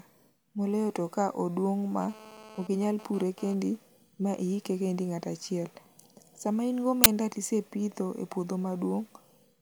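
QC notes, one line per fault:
2.01 to 3.54 s, GSM phone buzz: a raspy buzz about 19 dB under the speech, coming and going rather than steady, which fits a nearby 2G phone doing a data transfer. Its bursts at about 217 a second get rectified by the audio circuitry, so you hear a harmonic-rich 217 Hz rasp.
7.04 to 7.06 s, uninitialised buffer: a sudden 20 ms blast of digital noise. A buffer got played out before any audio was written into it, so whatever junk was sitting in memory came out as samples.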